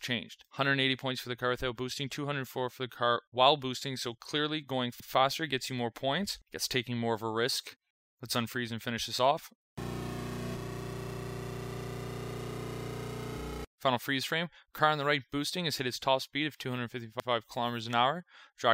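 At 5.00 s and again at 17.20 s, overlapping chunks cause a stutter. Each 6-second chunk starts early, so 100 ms plays twice at the join.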